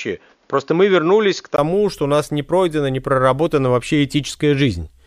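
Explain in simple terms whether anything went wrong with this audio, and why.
The first 1.58 seconds sound dull and muffled. Then a tiny gap before "что у нас не" and it clears up. Likely the input switched to a poorer device.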